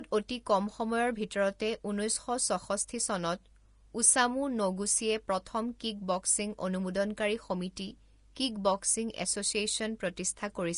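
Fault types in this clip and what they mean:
Vorbis compression: The whole clip has a hard ceiling, with nothing above about 10.6 kHz. Below that, the upper treble is grainy and hissy. Fine detail seems to have been replaced by noise of similar energy. Consonants sound blurred and the speech has a rough edge. This is the likely cause. The codec builds a smooth spectral outline and then quantises what lies on top of it very coarsely. The damage is plainly audible and fits a low bitrate, around 35 kbps.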